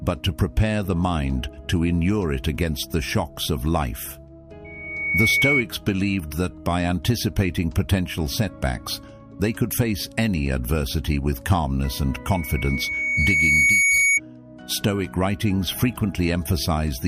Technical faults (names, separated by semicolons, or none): loudspeaker feedback squeal